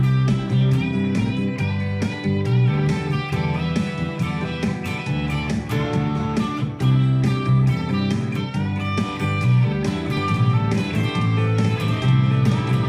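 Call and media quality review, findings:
Doubled audio track, 10.17 s to end. Likely a second, slower capture path or out-of-step edit mixing the signal in twice. Full-band copy trails by about one second, a few dB quieter, no decay or room colour, cutting in abruptly.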